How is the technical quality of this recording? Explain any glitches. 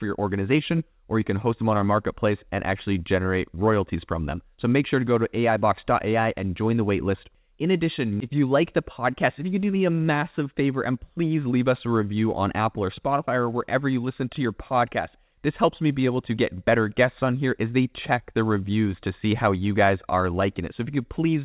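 No glitches to report: the speech has the narrowband character of an ordinary phone-grade call, with nothing above 4 kHz, consistent with a G.711 mu-law call path, and no faults anywhere in the recording.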